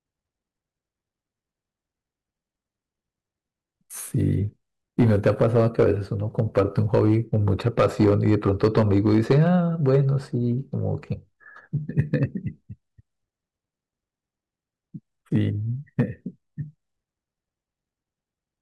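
Hard clipping appears where the speech overloads a stage that cannot pass it, so the peaks are sliced flat and the squared tops spray harmonics high into the spectrum. From 4.99 to 5.91 s, at about 6 dB over, and from 6.39 to 9.98 s, at about 8 dB, it is a harsh fuzz on every loud syllable. At 11.99 to 12.23 s (about 2 dB), 15.36 to 15.38 s (about 2 dB) and 15.99 s (about 4 dB), it is brief crackle.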